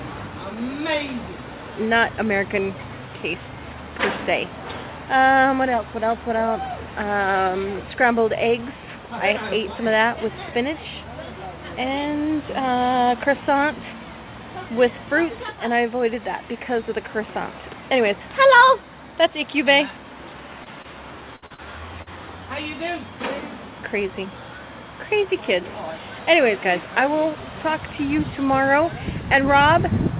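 Short concealed packet loss first appears at 20.64 s and again at 20.82 s. Each time, about 20 ms of audio never arrived, and the receiver covered the hole by extending the preceding sound before blending back into the real signal. Each one is heard as a brief smear or wobble. On a waveform, the cycles just before the gap are repeated for a moment. On a spectrogram, the harmonics briefly flatten into a smooth, static patch.

A burst of packet loss follows at 21.36 to 21.44 s, where about 60 ms went missing in one stretch. The receiver continued the last sound and let it decay, giving a held buzz or fading hiss, and the sound then resumes further along with that section gone. The waveform shows a repetitive stretch shrinking in level. On the spectrogram the harmonics stop moving and then jump abruptly to new content.

More short concealed losses come straight after, at 21.46 s and 21.54 s, each covering about 40 ms. 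Together with the burst, they make that quarter-second sound choppy and wobbling. A final one, also about 40 ms, lands at 22.02 s. Each shows the same frozen, looped spectral patch, visible against a band that stops at 4 kHz. That narrowband limit fits a G.711 mu-law call codec running at 64 kbps.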